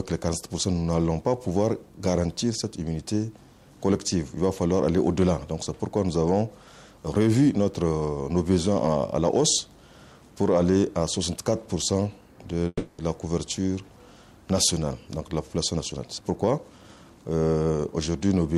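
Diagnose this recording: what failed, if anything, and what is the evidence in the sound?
Call audio freeze, 12.67–13.01 s: a fading buzz, then brief silence, likely from delayed network packets emptying the jitter buffer. A 310 ms gap is inserted, with nothing lost.

Jitter buffer speed-up, 15.75–17.05 s: playback runs at 124% at unchanged pitch as the receiver trims about 0.3 s of pitch periods to cut accumulated delay.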